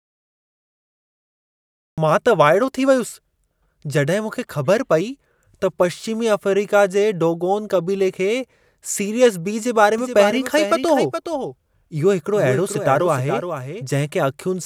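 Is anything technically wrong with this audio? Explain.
Yes. There are two faults.

The first is a cut-off start. The file opens with digital silence from 0.0 s to 1.98 s. The speech then begins abruptly at 1.98 s, already partway through a sound. There is no natural attack and no fade-in. This happens when the recording or stream starts late and catches the speech midway.

The second is a doubled audio track, from 9.98 s to 13.82 s. A second copy of the speech runs behind the original, around 400 ms late. It sits at about 10 dB below the main signal. The likely cause is the same audio being captured twice, with one path slower than the other. The copy is full-band and dry, with no room decay. It starts and stops abruptly.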